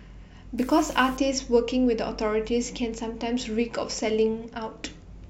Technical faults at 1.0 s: unreliable data bit

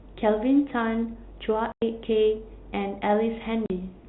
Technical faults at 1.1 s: none

